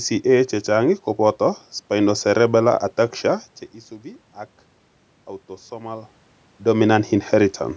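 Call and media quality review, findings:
Nothing to flag here: the speech sits on a typical call microphone chain with no content above 8 kHz, there's some ordinary room noise underneath, and the level shifts around 3.5 s and again near 6.5 s are just the talker moving relative to the mic.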